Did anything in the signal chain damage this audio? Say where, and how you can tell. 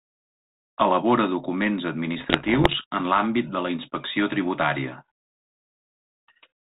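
Yes: bit errors on an ADPCM link, in the transmission stage, corrupt the speech from 2.18 to 2.84 s, ending just before "en l'àmbit de la". Through the 32 kbit/s G.726 path, which itself cuts everything above 4 kHz, around one percent of bits arrive flipped. Each error knocks the decoder's step size and predictor off track, so pops ring into rough, briefly louder or quieter bursts. A spectrogram shows scattered vertical streaks up to the 4 kHz ceiling, and the waveform shows spikes with short envelope jumps.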